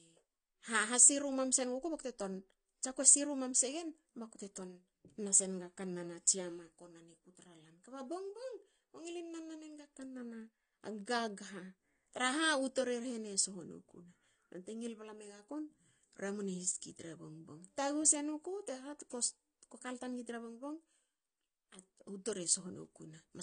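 Throughout, the speech stops dead at 9.6 kHz and sounds dull, warbly and smeared, likely AAC compression starved of bits, fitting roughly 32 kbps.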